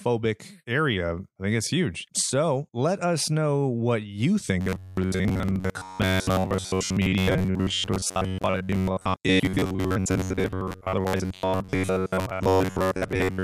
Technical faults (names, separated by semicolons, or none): robotic sound from repeated short buffers